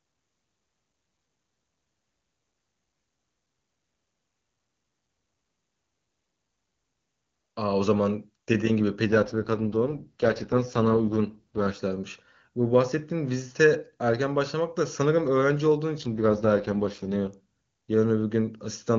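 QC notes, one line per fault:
9.06–11.80 s and 16.01–17.34 s, AMR rate drop: The speech turns rough, raspy and synthetic, then clears again at each end. The bandwidth stays the same and nothing drops out. The sound points to the AMR wideband codec falling from its clean top rate, near 23.85 kbit/s, to its lowest, near 6.6 kbit/s. It does this on a weak radio link, trading speech detail for error protection. At that rate the vocal tract model is coarse, so the speech sounds buzzy.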